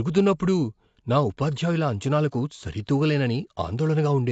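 From start to finish, the speech is dull and smeared. Nothing is heard above about 7.6 kHz, so the top of the band is missing. Sibilants turn fizzy, and sustained sounds carry a plainly audible warble. The likely cause is AAC compression at a low bitrate, which fits roughly 32 kbps AAC-LC. The encoder lowered its cut-off and starved the upper bands of bits. It also left gaps or noise-filled patches in the spectrum.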